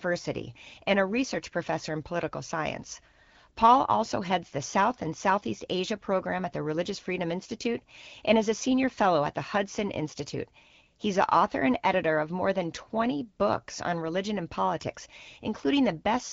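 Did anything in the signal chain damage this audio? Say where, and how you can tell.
No, nothing in the chain damaged this speech: it runs over the AMR wideband (HD Voice) codec at 12.65 kbit/s, which keeps the voice band clear and leaves only the light coding texture you'd expect from that rate.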